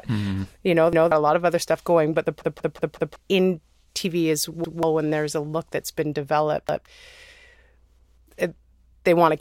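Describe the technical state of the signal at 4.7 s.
A repeated buffer runs from 4.64 to 4.83 s, just before "when there's a look": the last 186 ms block, which fits an 8192-sample buffer, plays twice, cutting a stutter with a hard join visible as an identical waveform segment and a vertical spectrogram seam.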